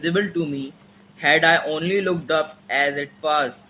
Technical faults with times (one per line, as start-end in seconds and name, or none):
0.73-0.90 echo leak